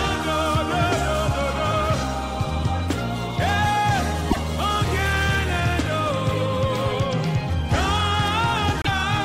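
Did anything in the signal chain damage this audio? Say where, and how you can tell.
Yes, at the codec stage: likely a broken MP3 bit reservoir, where frames after a cut decode from borrowed data that is gone. The sound skips with a brief glitch at 4.30–4.37 s and 8.82–8.87 s.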